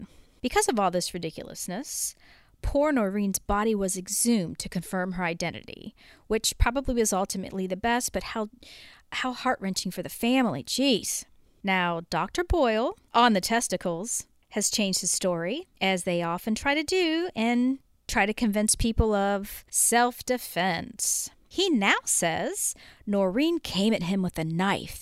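No technical faults can be heard anywhere in the recording, and the speech signal stays intact and continuous throughout.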